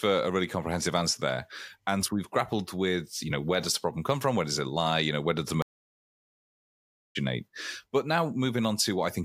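A stream reconnect at 5.62 to 7.17 s: right after "know where does the", the connection dropped, leaving about 1.5 s of silence before a fresh decoder picked up mid-stream. Speech resumes roughly a second and a half further on, its first instant muted or fading in.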